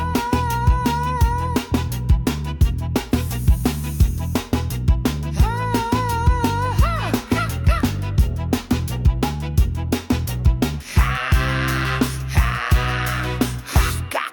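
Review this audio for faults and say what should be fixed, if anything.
Nothing stood out on listening, so there is nothing here that needs fixing.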